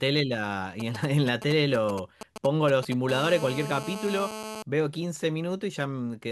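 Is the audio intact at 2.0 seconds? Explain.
No. GSM signalling bursts run from 0.8 to 2.94 s: a nearby 2G phone's short radio bursts are rectified by the audio circuit into a galloping dit-dit-dit of short 217 Hz buzzes, roughly 10 dB under the speech, visible as vertical stripes on a spectrogram.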